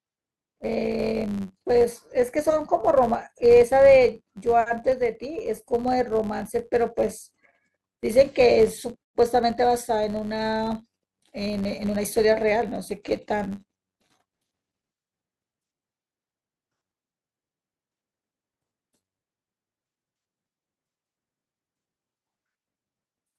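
Right through the speech there's a buzz sitting at about 93.8 Hz, which is the signature of a filter restarted on every block. Instead of carrying its internal state from one block to the next, the filter starts each block from silence, so every block boundary kicks off a tiny transient. Those transients line up into a steady tick train, and the rate fits a 512-sample block. The buzz rises and falls with the level of the speech, getting louder as the speech gets louder.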